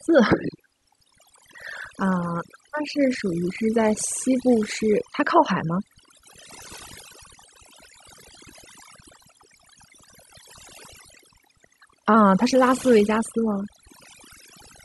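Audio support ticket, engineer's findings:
Overdone noise removal, whole clip. Background near-silent with twinkling specks. Denoiser set too strong, dropping bands near its noise estimate, quiet speech detail included. Unlike a noise gate: silence stays fizzy, never switches cleanly on/off.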